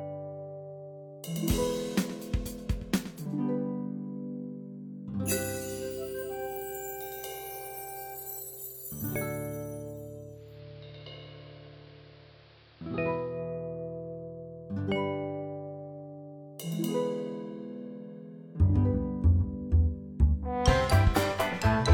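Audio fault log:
10.29–13.44 s, digital radio blending to analogue: after losing the digital stream, the receiver cross-fades over 339 ms to the AM broadcast. The spectrogram shows the narrower AM treble and a hiss floor roughly 30 dB down, and the waveform level shifts about 1 dB.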